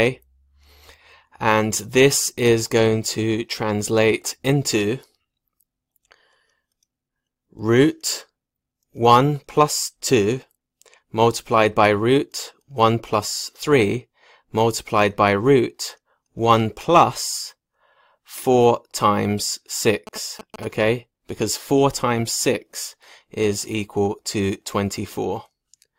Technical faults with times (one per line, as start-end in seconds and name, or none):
20.07-20.65 GSM signalling bursts